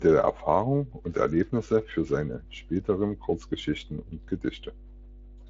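A steady mains hum at 50 Hz runs under the speech from start to finish, sitting roughly 15 dB below it. Power-line current has leaked into the signal, most likely through a ground loop or a nearby transformer. Unlike wind or handling rumble, it is a fixed, unwavering pitch that ignores the talker.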